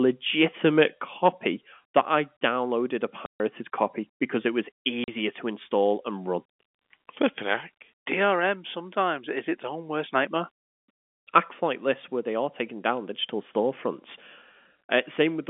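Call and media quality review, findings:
Microphone overload, 0.64–0.81 s. Input gain likely set too high, peaks about 2 dB past converter full scale. Waveform tops flattened, harsh crackle on loudest syllables.
Microphone overload, 1.26–1.28 s. Likely same over-hot input, about 1 dB over. Brief, dense clipping, short gritty burst.
Microphone overload, 1.97–2.00 s, just before "I downloaded a". Likely input overdriven again, about 3 dB over. Flattened peaks, crackling edge on loudest syllables.

Microphone volume stepped down, 1.02 s. Call software likely detected clipping after the 0.64 s overload and cut device input gain in one step, about 6 dB. Sudden drop in level of the sound and the background together, no fade, audible as a ledge. Clipping recurs afterwards at 1.26 s and 1.97 s despite the reduction.

Packet loss filled with silence, 3.26–3.40 s, 140 ms, between "I downloaded a" and "copy because it was". 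Network dropped consecutive packets. Receiver substituted digital silence, no concealment. Hard-edged hole.
Packet loss filled with silence, 5.04–5.08 s, 40 ms, between "copy because it was" and "to install and run". Same mechanism, shorter gap, sharp cut. Both gap lengths fit 20 ms packets. Surrounding audio passes the G.711 telephone coding band of roughly 200 Hz–3.5 kHz.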